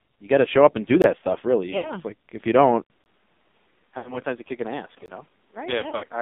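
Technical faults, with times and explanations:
Throughout: AMR narrowband mobile codec. The speech has passed through AMR-NB at 5.9 kbps, a low mobile bitrate, and the damage is heavy. The line carries only about 150 Hz to 3.6 kHz, so the sound is thin and muffled. The codec rebuilds speech from a vocal tract model fed by a few pulses. At this rate that model is starved of bits. The result is buzzy and synthetic.
1.02–1.04, 3.04–3.06 and 5.06–5.08: gap between chunks. Each hole is 20 ms of silence with hard edges. They fall every 2 seconds, which points to audio handled in 2-second chunks. The first comes right after "show up and do". The second comes shortly after "like if you don't". No speech is lost. The flow simply stops and restarts at each join, and that gives a regular stutter.
1.78–1.92, 3.98–4.20 and 5.80–6.08: lost AMR speech frames. About 60 ms of frames fail in the first spot, 80 ms in the second and 120 ms in the third. 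The last loss is scattered over 280 ms, with runs of up to 60 ms. The decoder fills each hole by repeating its last good pitch and vocal tract settings at falling gain. The sound smears and warbles, sags toward silence, then comes back rough.
From 2.82 to the end: input switched to a poorer device. Right after "like if you don't", there is a silence of about 80 ms. After it the level is about 5 dB lower. A new background noise sits roughly 35 dB below the speech. The tone also changes. This sudden shift in level, noise and tone most likely comes from the recording moving to another microphone or to a headset's call mode.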